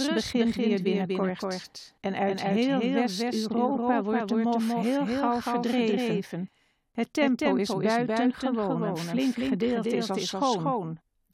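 From start to finish, the audio carries a doubled audio track. A second full-band copy trails the original by roughly a fifth of a second. It sits about 5 dB below the main signal. Every sound is followed by a clean repeat. The repeat has no decay and no room colour, so it reads as a duplicate rather than an echo. The likely cause is the same signal captured twice, once through a slower path.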